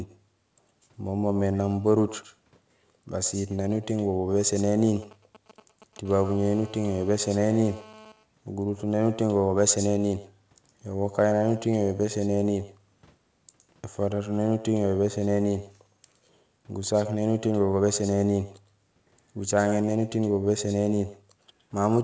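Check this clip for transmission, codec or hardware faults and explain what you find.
Three faults are present in the speech: an echo throughout and two kinds of mobile-phone interference in sequence. The audio passed through a G.722-style call path, and nothing is heard above 8 kHz.

Echo with no canceller runs the whole clip. The far end's loudspeaker leaks into its microphone, and nothing removes it. Each phrase returns after a round trip of about a tenth of a second. The copy sits about 17 dB below the speech and sounds thinner.

GSM signalling bursts occur from 4.41 to 6.07 s. A nearby 2G phone is exchanging short radio bursts before a call or message, and the circuit rectifies them. They sound like a galloping dit-dit-dit of brief 217 Hz buzzes, roughly 25 dB under the speech.

GSM phone buzz follows from 6.07 to 8.12 s, once that phone is in a call. Its transmitter now pulses 217 times a second, and the rectified pulses form a hard, raspy 217 Hz buzz, rich in harmonics. 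It sits about 25 dB below the speech.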